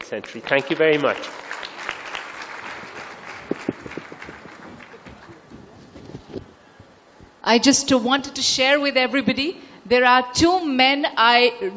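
No dropouts, clicks, distortion or timing faults are audible anywhere in the audio.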